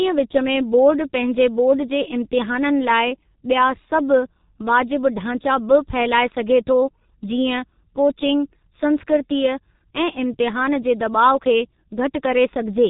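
From start to finish, the speech has gone through a G.723.1 codec, and it has taken heavy damage. This is an old internet-telephony coder that works in 30 ms frames. The sound points to a rate of about 6.3 kbit/s. Nothing gets through above about 3.8 kHz, so the voice is dull and boxed-in. The voice model also updates slowly, and that leaves a hoarse, grainy edge and smeared consonants all the way through.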